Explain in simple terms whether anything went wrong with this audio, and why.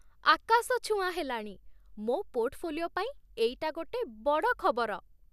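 Nothing went wrong; no faults can be heard anywhere here.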